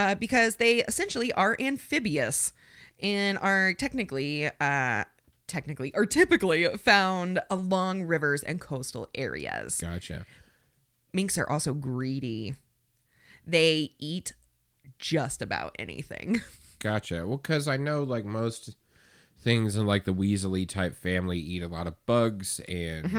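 No technical faults are audible.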